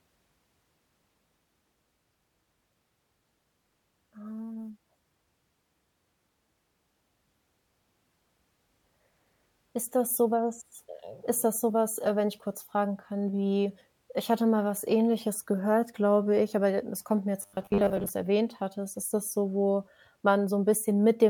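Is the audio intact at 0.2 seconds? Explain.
Yes, the audio is intact at 0.2 seconds, with no fault present at that moment.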